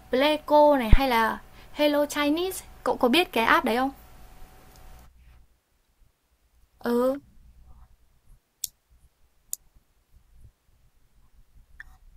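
Speech, with a phantom power thump from 0.93 to 1.0 s. Supply switching on the live input sends a step through the coupling capacitors. The deep thump peaks near about -1 dBFS and decays within 16 ms.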